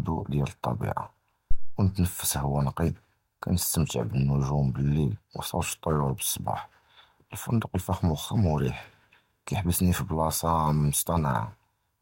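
A speech recording with a phantom power thump from 1.51 s to 1.82 s. A deep, low-frequency thud rises to a peak of about -10 dBFS and then dies away with a decay of roughly 70 ms. The cause is a supply being switched on or off while the input was live. The sudden voltage step passed through the coupling capacitors and into the signal path as a single pulse.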